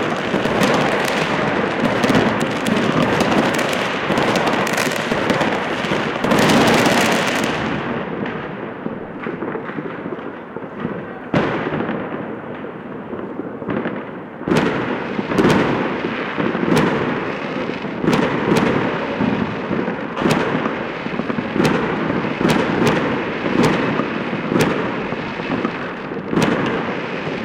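No technical faults can be heard in the audio.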